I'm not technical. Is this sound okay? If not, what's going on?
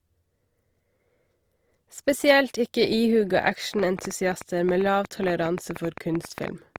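No. Opus compression runs throughout the speech. It sounds grainy and rough rather than clean, likely because the recording was squeezed into a small file: the encoder keeps the overall energy of each frequency range but fills in missing detail with approximations and noise.

A train of clicks runs from 3.74 s to 6.77 s, about eight irregular ticks per second, roughly thirty in all, standing out clearly above the speech. Something, likely electrical interference or a faulty connection or power supply, kept injecting short, similar pulses into the sound.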